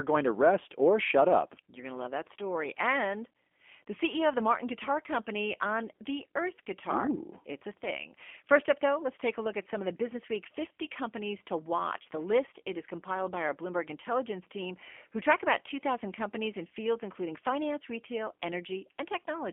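Throughout the clip the speech has passed through a G.729 codec, in its G.729A form. The sound points to an 8 kbit/s stream. Rather than carrying the waveform, the codec models each 10 ms frame as a vocal tract filter driven by a pitch predictor and a handful of pulses, and the line limits it to roughly 250 Hz to 3.4 kHz. The speech sounds plainly rough and synthetic, thin at the bottom, with everything above 3.4 kHz gone.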